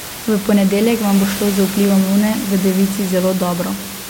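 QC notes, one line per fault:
No faults found.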